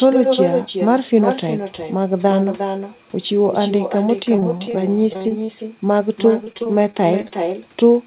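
Speech over what sounds like a narrowband call path, with nothing above 4 kHz, which fits G.711 A-law at 64 kbps. The far end is running with echo and no canceller, so their loudspeaker is feeding back into their mic the whole way through. Every phrase gets a thinner shadow about 6 dB down, landing roughly 400 ms later after the network round trip. Then there's repeated packet loss giving that robotic, choppy sound in three bursts: 4.36–4.75 s, 5.13–5.50 s (the worst, with holes up to 40 ms and about a third of it patched) and 6.44–7.32 s. The concealment stretches the last bit of sound over each hole, so you get choppy sound with chunks missing.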